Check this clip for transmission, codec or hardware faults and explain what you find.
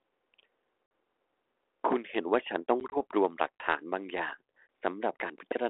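There are three dropouts from packet loss on an ADPCM call, over a G.726 link at 32 kbit/s. The codec's light graininess and 300 Hz to 3.4 kHz band are heard as normal.

Packet loss on an ADPCM call occurs at 0.86 to 0.91 s (50 ms, about five packets), at 2.80 to 2.97 s between "ต้อง" and "วบรว" (40 ms scattered in short gaps), and at 4.67 s after "ย่าง". Each gap is a hard silence. Afterwards the decoder's predictor and step size no longer match the sender's, so the speech returns with brief, slight distortion.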